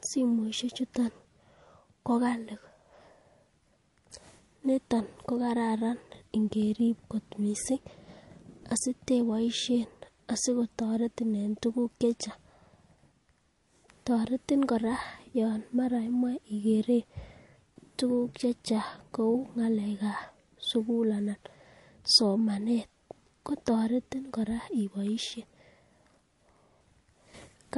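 Throughout the speech, the sound is band-limited with nothing above about 11.3 kHz, and s sounds carry a watery, swirling texture with smeared onsets. This is likely MP3 compression at a low bitrate, around 48 kbps, where starved frames drop weak frequency lines.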